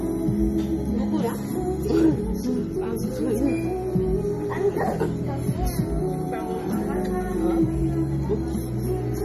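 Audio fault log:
Throughout: MP3 compression, likely the cause of a plainly audible watery, swirling texture. Nothing sounds above about 14.9 kHz, a fixed treble cut, and faint detail flickers in and out as weak frequency lines drop, which fits a starved bitrate near 40 kbps.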